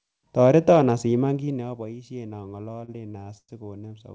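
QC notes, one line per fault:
2.72–3.50 s, repeated stalls (stutter): right after "asiman kiit naboishen" the flow of speech catches eight times as the jitter buffer keeps running dry. Each time, the receiver holds the last sound until the late packets arrive. About 225 ms is filled this way, roughly 29% of the span, and the longest hold is 107 ms, long enough to fade. No speech is lost, so this is a dragging stutter rather than the skipped syllables of packet loss.
3.88–3.92 s, short stall from a late packet: a single packet arrives about 18 ms behind schedule, and the receiver stretches the preceding sound by 18 ms to cover the wait. Playback then resumes exactly where it stopped, so nothing is cut out. What you hear is a brief held or slightly buzzy moment, not a gap or click. This is one isolated late arrival, unlike the clustered stutter just before it, and the speech around it carries the G.722 call path's band limit, with nothing above 8 kHz.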